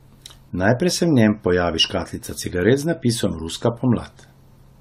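Across the whole recording the speech sounds swirly, smeared and hollow, with consonant onsets blurred, and the likely cause is generation loss: the audio was decoded and re-encoded around seven times with a lossy codec, consistent with AAC-LC at about 96 kbit/s. Each pass quantised on a shifted frame grid, compounding noise and spectral holes. A spectrogram would show a hard ceiling at 16.2 kHz, patchy gaps within the upper bands, and softened, time-spread transients.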